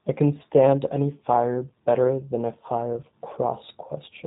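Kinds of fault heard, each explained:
G.729 codec: a low-bitrate VoIP codec, 8 kbit/s, rebuilds speech from a vocal tract model and sparse pulses, cutting everything above 4 kHz and leaving it audibly rough and synthetic throughout.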